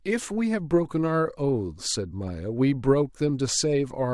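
No technical faults can be heard anywhere in the recording, and the signal stays intact throughout.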